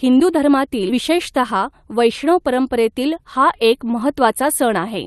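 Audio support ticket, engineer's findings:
Jitter buffer speed-up, 1.55 to 2.49 s. Speech sped up, pitch unchanged. Runs about 4% fast. Probable component: receiver jitter buffer draining excess delay after a late burst of packets. Mechanism: repeated cuts of one or a few pitch periods. Roughly 40 ms removed in total. Call path audible as coding noise with a 12 kHz top end, consistent with Opus at a modest bitrate.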